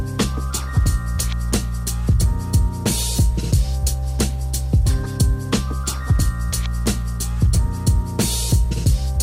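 Listening through the recording, nothing stood out as a technical problem at any point.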